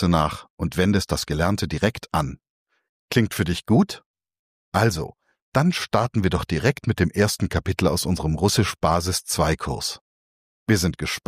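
There are no technical faults to describe anywhere in this audio.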